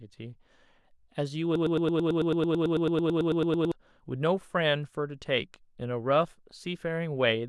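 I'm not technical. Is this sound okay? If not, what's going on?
No. From 1.56 to 3.72 s the speech gets stuck in a broken-record loop: a tiny slice of sound, about 0.11 seconds long, plays over and over, roughly 20 times in a row, making a stutter. The likely cause is that the player or stream stalled and kept repeating the last bit it had. Whatever was said during those two seconds is lost, not just delayed.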